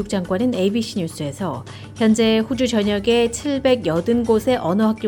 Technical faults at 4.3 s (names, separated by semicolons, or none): none